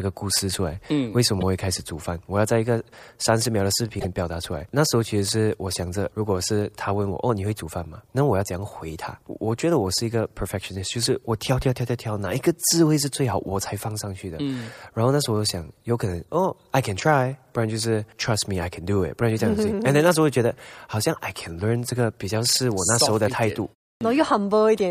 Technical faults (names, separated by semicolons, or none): damaged data in a compressed stream; clipped start after a pause